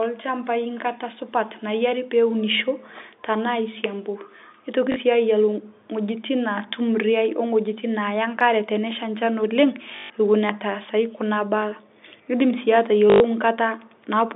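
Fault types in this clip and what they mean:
Packet loss with last packet repeated: at 4.92, 9.96 and 13.1 s, missing audio is filled by replaying the last packet, giving buzzy robotic stutters.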